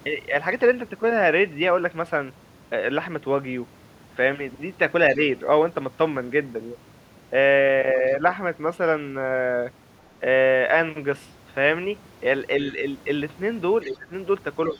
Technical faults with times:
5.15-5.20 speech suppressed in double talk
13.82-13.90 other side's voice leaking through
13.84-14.12 speech suppressed in double talk
14.72-14.79 speech suppressed in double talk

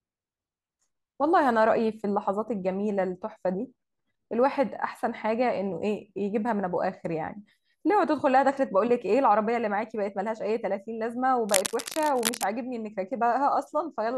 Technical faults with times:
11.49-12.44 cable scratch noise

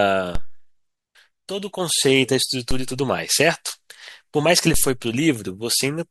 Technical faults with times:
0.35 DC step
2.71 DC step
4.74 DC step

